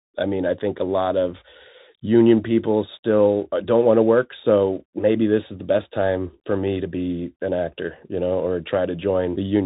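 Speech sounding muffled and scratchy throughout, with nothing above 3.8 kHz and a grainy hiss, points to a Bluetooth CVSD headset codec, whose coarse one-bit step coding distorts sibilants.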